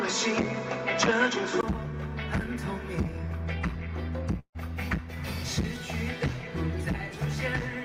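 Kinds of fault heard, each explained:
Input switched to a poorer device: Until 1.63 s the sound is capped near 7.4 kHz and sits about 5 dB apart in level, likely from a narrower-band input. A spectrogram shows a flat ceiling, then a roughly 20 ms blank before full bandwidth returns.
Long network dropout: Around 4.39 to 4.57 s about 160 ms of audio is missing, likely lost in transit. The receiver stretches the last sound as a fading buzz, and a waveform shows that decaying tail, then roughly 70 ms of near-silence.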